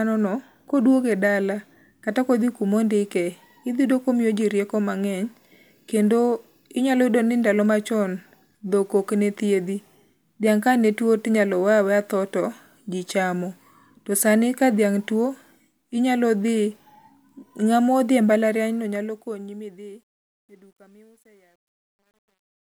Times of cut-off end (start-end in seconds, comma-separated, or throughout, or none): none